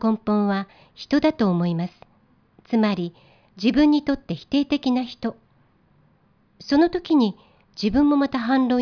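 No technical faults occur at any point in the speech, so there are none to describe in time order.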